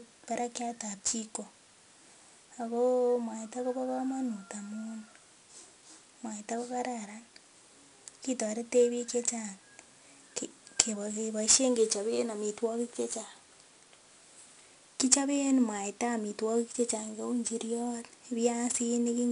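Speech, damaged throughout by 4-bit ADPCM compression. Coarse 4-bit prediction steps add gritty hiss on loud syllables. Nothing sounds above 10.6 kHz, which suggests a low sample rate, at a bitrate near 89 kbps.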